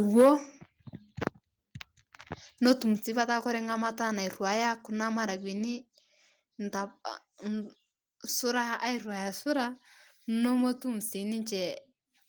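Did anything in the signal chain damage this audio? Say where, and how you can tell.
Yes. Microphone overload damages the opening, from 0.17 to 0.3 s, at the converter stage. The loudest peaks there are flattened and crackle harshly, roughly a tenth of the samples over that stretch. The likely cause is an input gain pushing peaks about 6 dB past full scale.

A microphone volume step-down comes from call processing. At 0.21 s, inside that distorted peak, the whole level falls by about 3 dB. At 2.97 s, just before "sii petaa kore", it falls by about 5 dB. Both drops are likely automatic gain control cutting device input after detecting a too-loud or clipping input.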